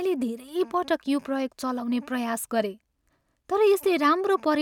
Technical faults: none

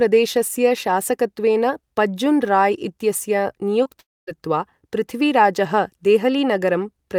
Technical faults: short concealed packet loss; long network dropout

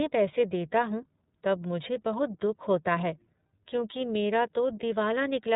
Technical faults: iLBC codec

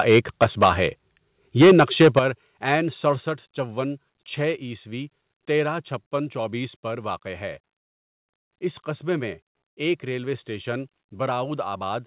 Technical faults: microphone overload; microphone volume stepped down

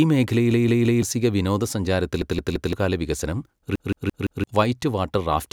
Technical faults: repeated buffer

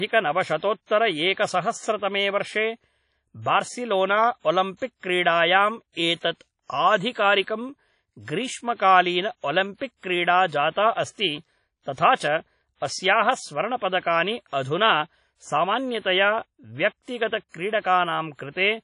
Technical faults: WMA compression; pre-echo

